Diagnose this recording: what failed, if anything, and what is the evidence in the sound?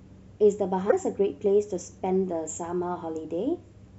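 The codec stage is where this one broke: a stretch of damaged data in the compressed stream, heard as a brief disturbance from 0.88 to 0.93 s in the speech. Corrupted bytes there threw the decoder off, so it misread those frames and lost sync until it locked onto the next valid header.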